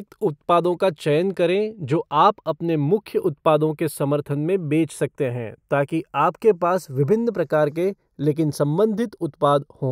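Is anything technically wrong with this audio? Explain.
Yes. Throughout the speech there is a slow, sweeping flanging, a hollow whoosh that drifts gradually rather than holding steady. This is channels drifting apart: the two channels were captured on separately clocked devices whose rates differ by roughly 20 parts per million, so the offset between them grows steadily, reaching only a fraction of a millisecond by the end. When the channels are combined, that changing delay moves comb-filter notches slowly across the spectrum.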